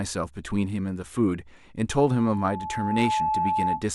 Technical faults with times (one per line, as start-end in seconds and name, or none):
1.90-3.87 loudspeaker feedback squeal